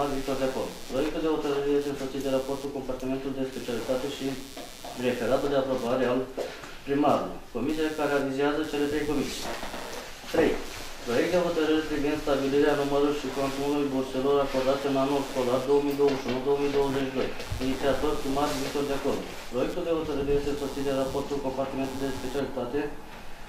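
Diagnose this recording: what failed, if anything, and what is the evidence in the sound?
Computer activity noise runs through the whole recording, a fault in the analogue wiring stage. Underneath the sound sits a buzzy, scratching pulse train at roughly 150 Hz, about 25 dB below the signal, and it follows the machine's workload rather than the audio content. As the processor, graphics card or mouse draws varying current, that load shifts the ground shared with the audio input, and the fluctuation is picked up as this intermittent chirping buzz.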